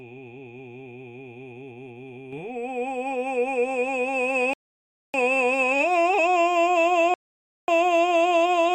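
At 2.33 s the music suddenly becomes louder by about 6 dB, and the background noise floor rises with it. This higher level lasts to the end of the clip, with no fade or ramp. This is a sudden gain jump, most likely caused by a digital gain setting or bit shift applied from one sample to the next rather than smoothed over time. Because signal and noise rise together, the change isn't in the performance itself.

At 4.53 s the music cuts to silence for 0.61 s and then resumes at exactly the point where it stopped. The same thing happens at 7.14 s, with a 0.54 s gap. These are rebuffering stalls. The player ran out of downloaded audio and waited for more data before continuing. No music is skipped, but each gap adds its silence to the running time.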